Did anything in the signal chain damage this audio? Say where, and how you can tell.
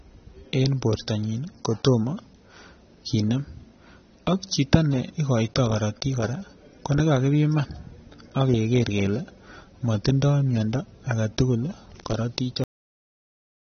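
Yes, in two places. The whole clip is band-limited, with nothing above about 6.3 kHz, and the speech has a dull, smeared quality with a watery, fizzy edge on sibilants. That's the signature of heavy AAC compression at the codec stage, most likely AAC-LC at a low bitrate around 24 kbps. At that rate the encoder lowers its cut-off and quantises the remaining frequency lines so coarsely that the damage is plainly audible.

The second fault is a cut-off end at the buffer or storage stage. At 12.64 s the audio stops dead mid-sound and drops straight to digital silence for the rest of the clip, with no natural decay at all. That abrupt edge tells you the final buffers were never written or played out, so the signal was truncated rather than faded or finished.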